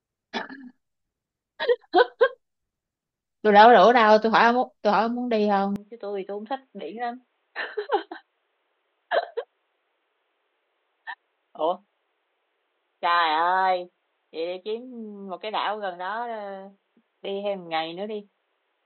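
From 5.76 s to the end, the speech abruptly turns dull and boxy with no gap at the change. It drops about 10 dB, loses everything above 4.1 kHz and gains a faint new background noise. This is likely an input switched to a poorer device.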